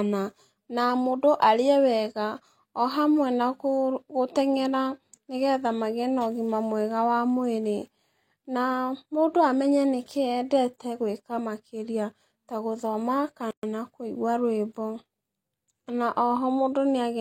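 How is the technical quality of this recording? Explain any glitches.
One glitch stands out in this speech recording: a gap at a join of encoded pieces at 13.51 to 13.63 s, between "gwĩka makĩria ta gũthoma" and "kũigua rwĩmbo". Two separately encoded segments were joined untrimmed, leaving about 124 ms of encoder start delay and end padding. Smeared edges bracket the silence, and speech then resumes exactly where it stopped. That seamless continuation, with nothing skipped, distinguishes it from a dropout.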